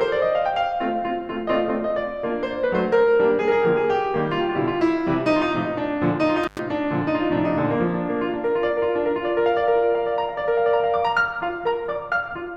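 Music, with one intermittent contact fault between 6.43 and 6.59 s. For about 95 ms the sound drops out almost completely. A brief crackle marks the moment it cuts and again when it returns. During the gap a faint hiss remains. This is what happens when a loose cable or plug briefly loses its connection. The signal path opens for a fraction of a second, then closes again as the contact settles.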